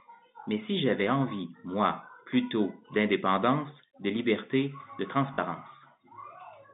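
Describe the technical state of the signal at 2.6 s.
At 2.6 s the speech is intact, carried through the G.711 telephone coding in its usual narrow telephone band, with no fault.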